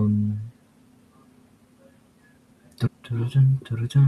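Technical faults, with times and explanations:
2.86 s, stream segment skipped: the speech jumps abruptly forward at this point, with a brief blip marking the join, and the speech after it does not follow on from what came before. The abrupt discontinuity suggests a stretch of the programme is absent rather than muted. The likely cause is a segment of the stream that failed to load, with the player moving straight on to the next segment, so the missing material is simply never played.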